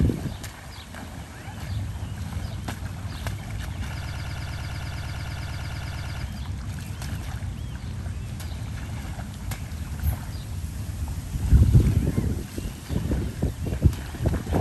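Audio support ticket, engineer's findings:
Broken-record loop, 4.03–6.23 s. A 0.11 s fragment repeats exactly, back to back, 20 times. Likely a stalled player, encoder or stream buffer re-sending the last fragment it held. The audio due in that window is lost, with no catch-up afterwards. Check the upstream feed and the buffer-underrun handling.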